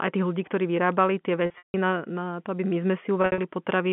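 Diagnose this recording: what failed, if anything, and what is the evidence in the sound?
Network stage: packet loss with pitch repetition. After "ľudí ktorí vyrábali tie", 1.46–1.74 s, 220 ms is lost in gaps up to 160 ms; repeated pitch periods buzz, then fade to silence before "na na to aby". After "to aby my sme", 3.22–3.38 s, 120 ms is lost, longest gap 60 ms.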